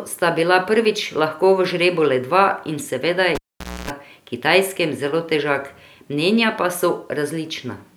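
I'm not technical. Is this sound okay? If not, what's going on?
No. At 3.35 s, a cable is pulled and plugged in again while the sound is live. A pop cuts the speech out for about half a second. As the plug goes back in, a 60 Hz mains hum plays for 0.28 s. Another pop at 3.90 s brings the speech back.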